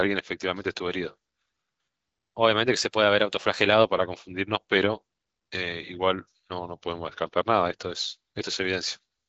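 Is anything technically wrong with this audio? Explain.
Yes. Twice the speech abruptly changes speed and pitch together and then snaps back, which points to a drift correction step. From 2.07 to 3.85 s the audio runs 5.9% fast and sits about a semitone (99 cents) sharp. From 6.77 to 7.42 s it runs 5.9% slow, about 105 cents flat. The likely cause is clock-matching software changing the playback rate in a single jump to refill or drain its buffer. Wow or flutter would wobble continuously, but here each shift holds steady and returns at once. The AMR-WB wideband path is audible as the band stopping near 7.6 kHz.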